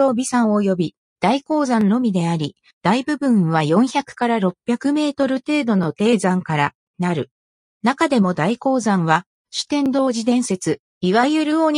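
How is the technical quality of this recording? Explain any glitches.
Three glitches from overlapping chunks, at 1.81–1.84, 5.84–5.86 and 9.86–9.88 s. Each 4 s chunk starts early, replaying about 23 ms, so there's a small stutter-click.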